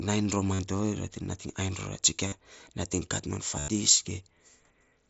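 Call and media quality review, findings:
Concealed Bluetooth headset packet loss, three events: 0.54–0.59 s and 2.28–2.32 s (45 ms each), 3.59–3.68 s (90 ms). Buzzy, level-held repeated tone filling each gap, slight warble on recovery. Headset-to-phone link dropping packets, which fits runs of six and twelve frames; the receiver loops the best-matching recent waveform segment. The 90 ms run is the longest. The mSBC wideband path can be heard carrying audio up to 8 kHz around these gaps.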